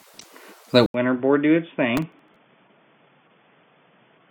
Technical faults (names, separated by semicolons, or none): input switched to a poorer device; processor overload crackle